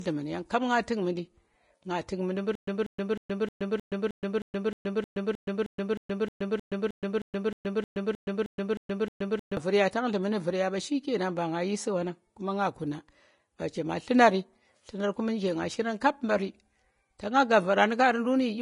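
The speech was likely squeezed through low-bitrate Vorbis compression throughout, at a rate consistent with around 33 kbps. Nothing remains above 10.5 kHz, and the coarsely quantised treble turns into hiss and grain that plainly roughens the voice and softens its consonant attacks.

From 2.55 s to 9.57 s, a stalled player or stream, likely retrying, produces a stutter with silent gaps. A 190 ms fragment repeats 22 times, each followed by about 120 ms of dead silence, a steady 311 ms cycle. The speech that should fill this stretch is lost.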